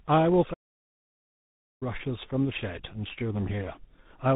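From start to finish, a block size mismatch (truncated) means one stage writes longer blocks than the next reads, discarding each block's tail. This leaves a 50 Hz buzz, with speed essentially unchanged. Throughout, tandem speech coding is audible: the speech passed through GSM full rate and then CVSD, with G.711 between them, and was re-encoded at each border. That makes it rough, muffled and warbly. From 0.53 to 1.83 s, a playback stall, likely the player running out of data, cuts the speech off mid-flow into about 1.3 s of silence before it resumes.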